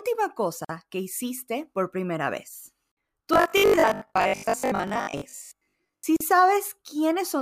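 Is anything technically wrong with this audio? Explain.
Yes. There is a gap at a join of encoded pieces at 0.65–0.69 s (45 ms) and at 6.16–6.21 s (40 ms). The encoder's padding silence was left in, so the silence has smeared edges and the sound resumes exactly where it stopped, unlike a dropout.

From 3.34 to 6.06 s there is robotic sound from repeated short buffers: a rigid, metallic 50 Hz buzz that still loosely tracks the speech. This is likely caused by replaying the last 20 ms for roughly half the span. Its fixed pitch distinguishes it from ordinary codec warble.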